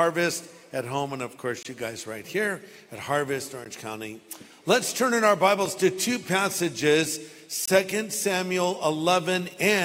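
At 1.63 to 1.65 s, 3.65 s and 7.66 to 7.68 s you get a gap between stream segments. The segment timestamps don't quite meet, so the player drops in silence, leaving sharp-edged dropouts of roughly 12 to 23 ms, spaced to fit 2-second segments.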